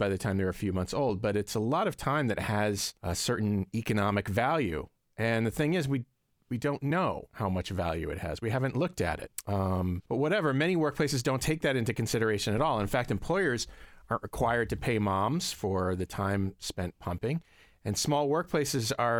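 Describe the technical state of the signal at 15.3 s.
At 15.34 s the speech carries a single sharp click, the mark of dropped samples: roughly one sample is likely missing from the stream, so the waveform steps abruptly to a later value. Far too brief to remove any sound, it shows as a thin vertical line across the spectrum.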